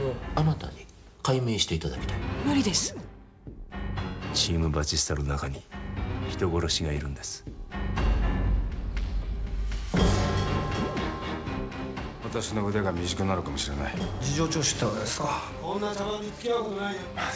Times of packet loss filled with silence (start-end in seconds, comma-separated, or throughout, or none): none